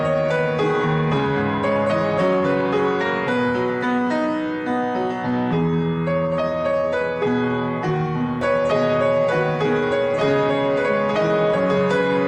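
From 8.41 s to the end, a second copy of the audio, somewhat quieter and about one and a half seconds behind, cuts in abruptly as a doubled audio track, likely from a slower duplicate capture path.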